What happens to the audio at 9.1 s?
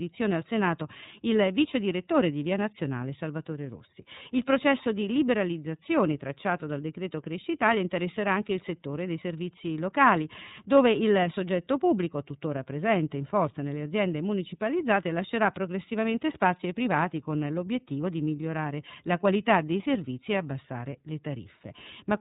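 At 9.1 s the speech carries iLBC codec damage, as it does through the whole clip. Each frame is coded on its own, and nothing above 4 kHz survives. The sound is dull and a little rough and synthetic, which fits 30 ms frames at 13.33 kbps.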